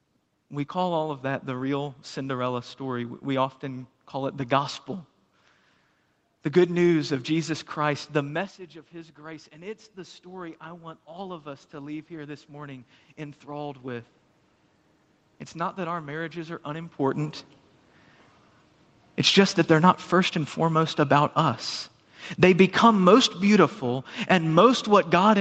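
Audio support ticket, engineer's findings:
Automatic gain rising, 8.91 to 14.17 s, just after "the message of". Level drops about 17 dB as the talker moves back near 8 s. The AGC then climbs about 10 dB over five seconds. Voice and room noise swell together. Component: call microphone AGC, slow release.

Automatic gain falling, 19.16 s to end of clip. Follows the talker moving near 17 s. Sound starts loud, then sinks steadily, room noise sinking with it. Component: same AGC, now pulling gain down. Nothing above 8 kHz, consistent with the Opus call path.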